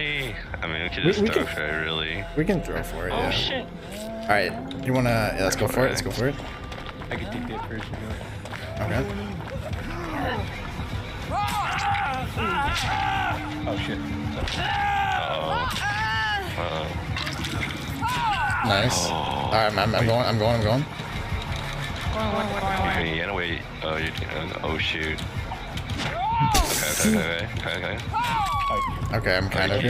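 From 21.0 to 23.0 s there's a doubled audio track. A dry copy trails around 150 ms behind at similar loudness, switching in and out abruptly, likely from a second, slower capture path.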